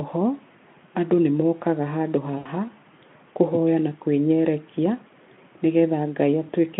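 VoIP packet loss concealed by the speech codec hits from 2.37 to 2.47 s. With about 80 ms of data missing, the Speex decoder extrapolates its last pitch and filter at falling gain, so the speech smears into a brief, fading buzz or coloured noise and stays weak just afterwards.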